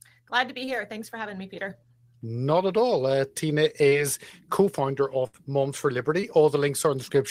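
At 0.65 to 0.69 s and again at 3.89 to 3.93 s, short concealed packet loss occurs: about 20 ms of the speech arrived too late to decode, so the receiver extended the preceding sound to cover the hole before rejoining the real signal, leaving a brief smear or wobble. At 5.27 to 5.35 s a burst of packet loss drops about 60 ms in a row. The decoder stretches the last sound over the gap while fading it, giving a held buzz or dying hiss, then jumps ahead with that stretch of speech gone. A final short concealed loss at 6.21 to 6.25 s repeats the earlier brief smear.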